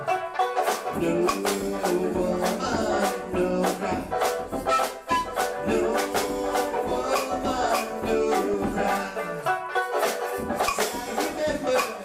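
At 8.54 s there's a quick blip of DAB burbling, and it comes back for longer from 10.29 to 10.48 s. Weak reception lets bit errors slip past the error correction into the MP2 data, so corrupted samples put short noise blips in single sub-bands and corrupted scale factors make individual sub-bands lurch in level for up to a frame. You hear a burbling disturbance sitting on top of the sound. The error rate looks small, a fraction of a percent.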